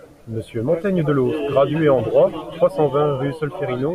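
Nothing goes wrong anywhere in this bit of speech, so there's no technical fault to point to.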